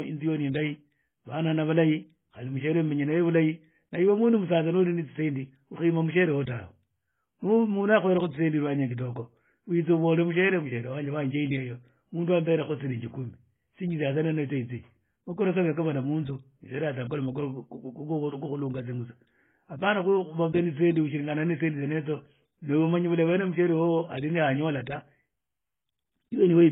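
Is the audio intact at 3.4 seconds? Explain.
No. At 3.4 seconds, as throughout, the speech shows transcoding between lossy codecs, likely an AAC-LC stage re-encoded as HE-AAC. Its band ends near 3.7 kHz, and two distinct sets of codec artefacts layer together, unlike a single codec's one consistent character.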